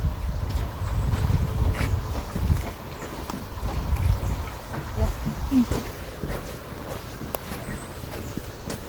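No technical faults can be heard anywhere in this audio.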